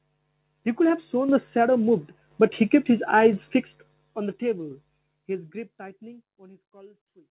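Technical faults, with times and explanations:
1.29, 2.31, 3.33 and 4.71 s, microphone volume stepped up: the call software judged the input too quiet and raised the microphone's level in single jumps of about 7, 6, 4 and 6 dB. Each is an instant, audible step in which voice and background noise rise together. This sets it apart from the slow, smooth fade-out over the second half and from compressor pumping, which breathes rather than staircasing and never lifts the noise floor in one step.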